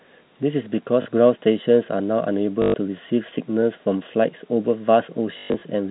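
At 1.02 to 1.06 s, 2.62 to 2.74 s and across 5.38 to 5.62 s (160 ms lost in scattered gaps, longest run 120 ms), the speech shows packet loss with last packet repeated. The receiver replays the previous packet, so longer runs buzz with a robotic stutter that fits 20 ms packets. Concealment by repetition, rather than silence, separates it from a plain dropout. The G.711 telephone band stays intact around it.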